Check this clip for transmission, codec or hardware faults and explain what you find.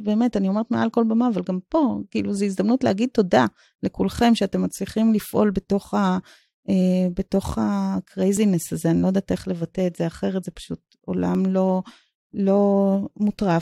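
The speech has one fault, repeated three times: overlap between stream segments, at 8.37, 9.36 and 11.35 s. The timestamps of adjacent one-second segments overlap, so the player discards about 13 to 18 ms of real audio at each boundary. The waveform jumps there, heard as a brief click or skip.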